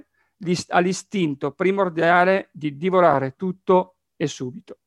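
At 0.99 s, just before "primordiale di", and again at 3.14 s, just after "primordiale di", the speech has a repeated buffer. The next block of audio arrived late, so the same 5.8 ms piece, which fits a 256-sample buffer, played again: twice more at the first spot and once more at the second. Each repeat is heard as a short click or buzz. On a waveform, the identical short cycles sit side by side with hard joins, and a spectrogram shows narrow vertical lines at the joins.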